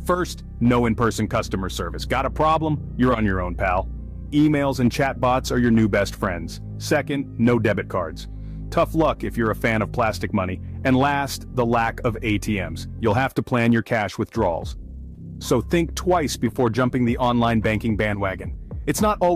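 Hard clipping runs through the whole recording. The signal reaches a stage about 4 dB hotter than it can pass, so every peak that crosses the ceiling is sliced flat. Only a small share of the audio, under one percent, goes over. The damage is therefore brief crackle and grit on the loudest moments rather than constant fuzz. The squared-off tops add harmonics well up the spectrum, which is why each overload sounds edgy and bright.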